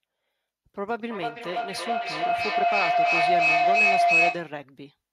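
Feedback howl runs from 0.98 to 4.63 s: a microphone and loudspeaker on the same call share a room, so each round trip adds gain. The repeats swell into a tone near 700 Hz, pulsing roughly every 300 ms and peaking about 10 dB above the speech.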